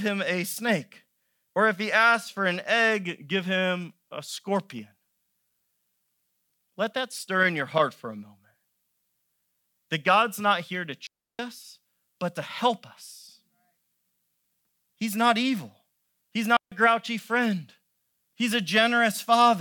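Digital wireless dropouts at 11.07 s and 16.57 s: the receiver lost too much data and muted, leaving clean near-silent holes of 322 ms and 150 ms, with no noise burst.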